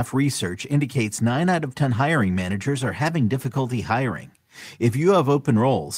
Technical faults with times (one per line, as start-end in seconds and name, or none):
none